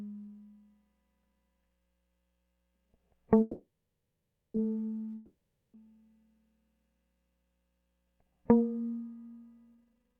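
At 3.41 s the music stops and a fading buzz carries the last sound before settling into silence for most of the gap. It resumes at 4.56 s where it left off. This is a call audio freeze, likely from delayed packets draining the jitter buffer, adding about 1.13 s of delay.

From 5.16 s to 5.76 s a long network dropout occurs. The last sound decays briefly into roughly 0.4 s of silence. When the music returns, about 0.58 s of it is gone for good, likely because those packets never arrived.

From 9.75 s to the end, a jitter buffer speed-up plays the music at about 203% speed with pitch unchanged. The receiver trims short pitch-period pieces to shed roughly half a second of excess buffering, so the tempo rushes unevenly.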